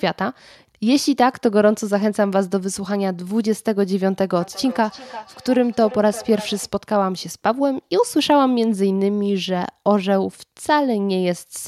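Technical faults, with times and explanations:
4.41 to 6.72 s, feedback echo between two devices: the speech comes back around 300 ms later, thinner and ringing, at its loudest about 15 dB below the direct sound. Two devices on the same call are sharing a room, so one plays out what the other's mic sent, and that mic hears it again. Each device's echo canceller only removes its own playback, so the other device's output slips back into the call as a delayed copy.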